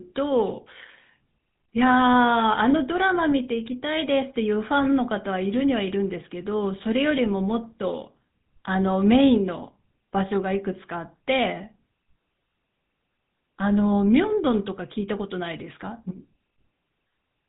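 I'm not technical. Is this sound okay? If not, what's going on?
No. The whole speech clip went through the old GSM full-rate codec from mobile phones. It sounds buzzy and gravelly throughout, and the crisp high sounds are missing.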